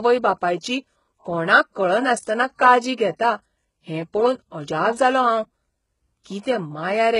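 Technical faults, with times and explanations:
Throughout: HE-AAC compression, heavy, with nothing above 11.1 kHz. The upper band sounds bright but synthetic, so sibilants come out gritty and lispy. Unlike a plain low-pass, the treble is likely rebuilt from copied lower bands, which fits a rate near 12 kbps.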